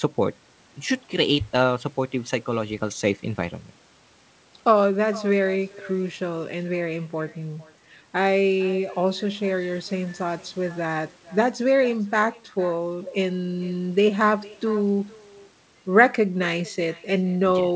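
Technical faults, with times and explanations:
Throughout, echo with no canceller: each phrase returns about half a second later as a thin copy about 21 dB quieter. Unlike room reverberation, it is a separate repeat after a gap, because the far loudspeaker feeds its microphone unremoved across the network round trip.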